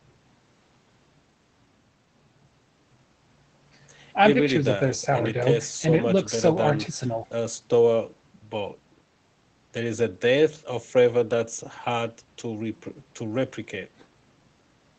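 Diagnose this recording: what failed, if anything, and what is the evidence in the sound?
Nothing stood out on listening to this speech recording, with no failure audible at any stage.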